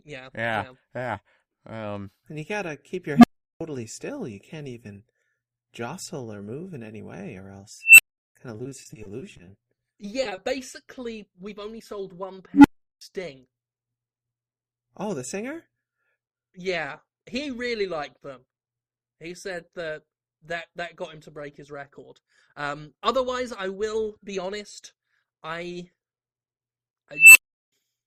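At 3.16 s an unstable filter sets off. A low tone near 200 Hz swells over about 75 ms until it clips, then the output overflows and drops to silence for roughly 0.37 s while the filter resets. The same happens at 7.81 s with a high squeal near 3 kHz building over about 170 ms, at 12.54 s with a tone near 300 Hz building over about 100 ms, and at 27.13 s with another 3 kHz squeal rising over about 220 ms. Each time, a recursive stage with bad coefficients feeds its own output back with gain above one. What separates this from packet loss is the pure, steadily louder tone and the hard silence that follows, rather than smeared copies of the existing sound.

From 8.57 to 9.79 s comes repeated packet loss with a robotic sound. Many holes of up to 20 ms each, about a fifth of the stretch in total, are patched by extending the last bit of sound, and the next hole arrives before the patching has settled. 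The result is a choppy texture with fragments missing. Unlike the filter faults, nothing grows louder and no silence opens up.

Short concealed packet loss follows at 10.23, 10.29 and 10.35 s, each a single hole of about 20 ms filled by continuing the preceding sound and blending back. These come across as isolated wobbles or brief smears. They are too sparse to build the sustained robotic quality of the earlier stretch.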